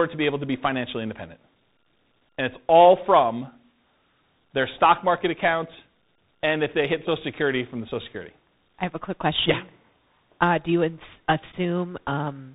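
Throughout the clip, the speech passed through tandem speech coding: it was decoded and re-encoded at each link, with two lossy speech coders in a row, so the second worked on the first one's damage. The result sounds rough and noisy, with nothing above about 3.8 kHz. The granular, hissy edge on the speech fits a chain that ends in CVSD delta modulation, following ADPCM at 40 kbit/s and A-law.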